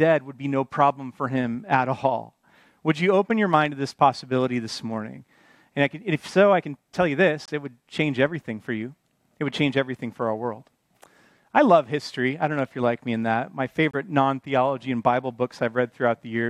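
At 7.46 to 7.49 s and again at 13.91 to 13.95 s, the sound drops abruptly to silence. These are corrupt frame muted faults: damaged compressed frames were rejected and replaced with silence, one frame length first, then what fits two. Waveforms show flat gaps, spectrograms blank vertical columns, with timing intact.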